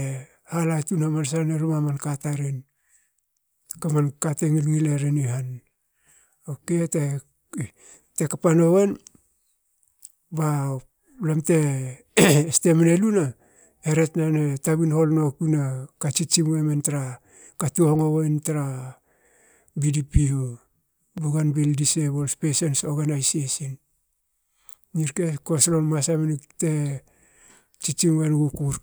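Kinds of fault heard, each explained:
Repeated buffer: fresh audio didn't arrive in time, so the last tiny chunk got played again. Here the chunk is about 5.8 ms, which fits a 256-sample buffer, so the repeats come across as a quick click or brief buzz at 21.18 s and a slightly longer one at 22.79 s.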